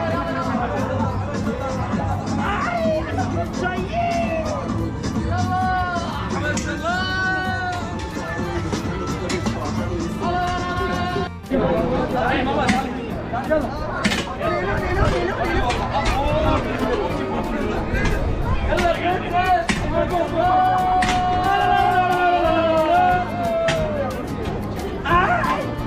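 No technical faults can be heard anywhere in this recording.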